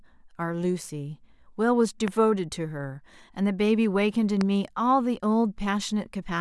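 At 2.08 to 2.10 s and again at 4.41 to 4.43 s there's a loud pop, a single sharp click jumping roughly 15 dB above the speech, which keeps going underneath. It's likely a brief voltage spike, say from static or a switch, getting into the signal chain.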